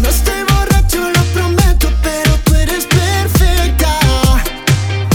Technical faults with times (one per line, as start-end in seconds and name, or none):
none